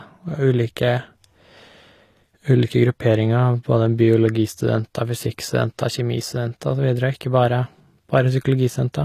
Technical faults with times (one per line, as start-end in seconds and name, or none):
0.00-9.05 HE-AAC compression